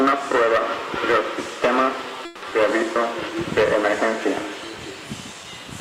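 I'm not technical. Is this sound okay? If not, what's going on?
No, there are three problems, two of them close together.

At 2.25 to 2.44 s the sound briefly hangs: for about 170 ms the last bit of audio is drawn out as a fading buzz instead of moving on. This is a call audio freeze, likely caused by audio data arriving late so the receiver's holding area ran dry and it improvised filler. When the data arrived, playback resumed where it had stopped, so nothing was lost, only delayed.

Right after, at about 2.50 s, there is a skip ahead. Roughly a tenth of a second of audio is simply missing, and the sound on either side is joined almost directly with only a tiny filled gap. The system likely dropped that stretch to catch up on the delay the freeze had just added, trading a small loss for getting back on time.

From 5.34 to 5.65 s there is a jitter buffer slow-down. The receiver was short of stored audio, so it repeated tiny slices of the sound to stretch it, adding about 52 ms. 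That part plays at about 86% of normal speed with the pitch unchanged, so it sounds slightly dragged out and may waver a little.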